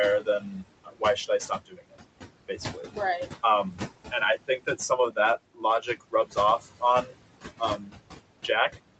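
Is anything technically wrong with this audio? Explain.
Yes. A noise suppressor is acting on the speech for the whole clip, and in places it mistakes parts of the speech itself for noise.

Noise suppressor artifacts run throughout. The suppressor pulls the steady room noise down by about 21 dB, frame by frame, so the background drops away between phrases and swells back under them. Because the noise itself pumps with the speech, this is processing rather than a noisy room.

Speech cut by the noise suppressor occurs from 0.2 to 1.97 s, 2.48 to 7.17 s, and 7.59 to 7.97 s. Soft consonants and word endings fall by up to about 22, 19 and 16 dB respectively, roughly a second, a second and a half, and a fifth of a second in all. They sound swallowed rather than clipped or dropped, unlike packet loss, because the level sinks smoothly instead of going silent or glitching. The room noise, about 12 dB below the speech, and the band limit at 8 kHz from the call path are ordinary for a call.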